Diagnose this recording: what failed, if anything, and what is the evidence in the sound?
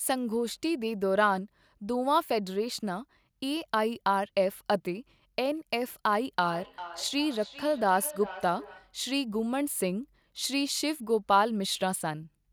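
Feedback echo between two devices, a call-processing failure. From 6.44 s to 9.0 s the speech returns at a steady interval of roughly 400 ms, each repeat thinner and more ringing than the last, peaking at about 14 dB below the direct speech. A second device in the same room was playing this call aloud, and the first microphone picked that playback up again. Its echo canceller only models its own loudspeaker, so the loop went uncancelled.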